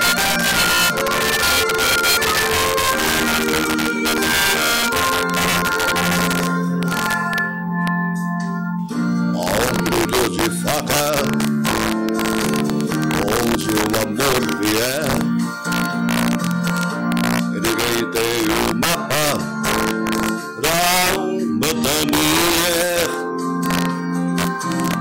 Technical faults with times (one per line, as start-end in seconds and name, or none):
0.00-25.00 integer overflow